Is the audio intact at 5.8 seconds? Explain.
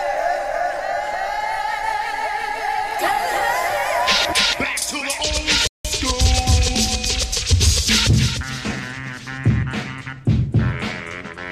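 No. At 5.8 seconds the sound is in a rebuffering stall. It runs from 5.67 to 5.85 s. The player used up its downloaded audio and had to wait for more data. The sound drops to silence for about 0.17 s. Then it picks up exactly where it broke off. No audio is missing. The gap simply adds about 173 ms to the playback, so the moment asked about falls inside dead air.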